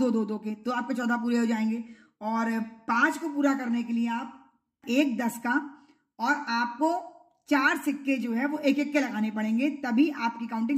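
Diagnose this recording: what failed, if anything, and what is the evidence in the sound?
Nothing failed; no faults heard.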